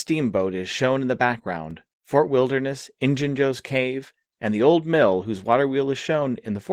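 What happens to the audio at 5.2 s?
At 5.2 s the speech is passing through Opus voice compression at 16 kbps in hybrid mode, in 20 ms frames: a linear-prediction layer codes the lower band and a transform layer covers the top, both with coarse detail. The damage is plainly audible, with the speech sounding hoarse and slightly robotic.

The moment also falls inside a DC step. The waveform's zero line jumped at 1.71 s and stays offset through the end of the clip. The thump came at 1.71 s, so at 5.2 s the offset persists silently beneath the sound.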